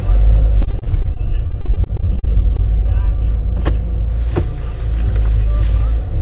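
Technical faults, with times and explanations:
0.62 to 2.60 s: repeated packet loss (robotic sound). About 22 gaps, the longest around 37 ms, were each filled by extending the preceding sound, so roughly a fifth of this stretch is concealed. The rapid succession of patches gives a choppy texture with brief pieces missing.
1.27 to 3.18 s: jitter buffer slow-down. The receiver stretched playback by repeating short pitch periods to rebuild its reserve, adding about 40 ms and running at 98% speed. Pitch stays the same while sounds drag slightly, heard through a call path band-limited to 4 kHz.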